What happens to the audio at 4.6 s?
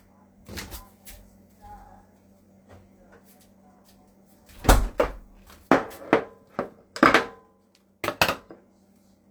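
Nothing goes wrong at 4.6 s; the sound carries straight through that moment with no dropout, click, distortion or other fault.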